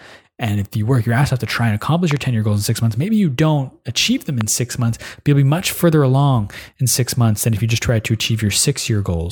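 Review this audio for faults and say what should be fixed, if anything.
A loud pop interrupts the speech twice: a double pop from 2.11 to 2.19 s and a single one from 4.41 to 4.43 s, each roughly 15 dB above the signal. A sudden voltage step, likely from a connector, switch or static discharge, is shaped by the following circuitry into a brief pulse while the speech continues underneath. On a waveform these appear as tall, narrow spikes, and on a spectrogram as thin vertical stripes running across all frequencies. Securing connectors, muting before switching anything in the chain, and proper grounding against static would prevent them.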